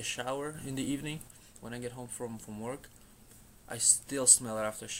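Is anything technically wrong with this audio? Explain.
Yes. From 0.55 s to 1.28 s there is a sudden gain jump. The level rises by about 5 dB at once, and the background noise rises with it. The likely cause is a digital gain change applied between two samples without any ramp.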